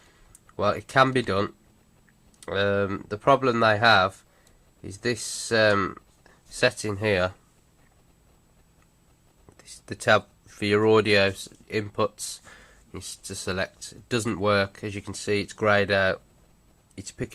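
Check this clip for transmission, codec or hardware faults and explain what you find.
Nothing faulty can be heard anywhere in this recording.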